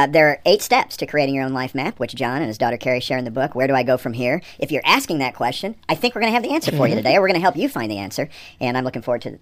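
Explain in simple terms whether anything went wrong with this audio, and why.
A wrong sample rate runs the whole way through: the speech plays about 1.38 times too fast and roughly 5.5 semitones high, which fits 32 kHz audio played at 44.1 kHz.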